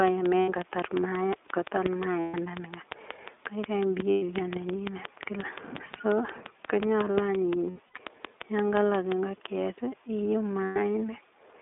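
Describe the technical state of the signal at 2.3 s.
At 2.3 s the sound sits inside a stretch of lost iLBC frames running from 2.20 to 2.36 s, a 140 ms gap that fits seven lost 20 ms frames. The decoder fills it by repeating the last pitch cycle blended with noise, so it comes across as a held, slightly buzzy vowel-like tone, and normal sound returns almost immediately after 2.36 s.

A train of clicks runs over the same moment, part of a regular series at 5.64 clicks per second from 0.08 to 9.13 s, about fifty in all, peaking roughly 10 dB above the signal. They are evenly spaced, similar ticks, likely from interference in the equipment or a faulty connection.

Underneath, the whole signal carries the iLBC codec's narrowband character. The line passes only about 300 Hz to 3.6 kHz, and each 20 ms frame is coded independently. That leaves plainly audible rough, synthetic texture and dull, band-limited tone, consistent with the 15.2 kbps mode.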